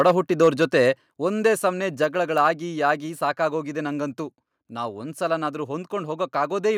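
Speech with harsh, crackling edges on its loudest peaks from 0.00 to 0.11 s, 0.41 to 0.65 s and 2.40 to 2.47 s, likely microphone overload: input driven about 3 dB past the converter's ceiling in the first two, flattening a few percent of samples, and about 1 dB in the third, clipping under one percent. At 1.02 s the speech and background drop together by about 4 dB in a single step, likely the microphone volume stepped down by the call software reacting to the earlier clipped peaks.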